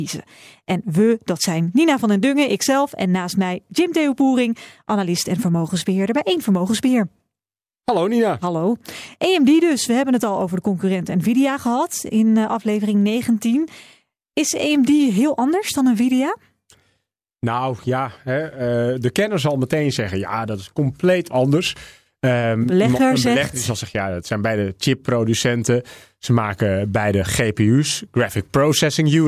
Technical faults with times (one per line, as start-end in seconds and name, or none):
none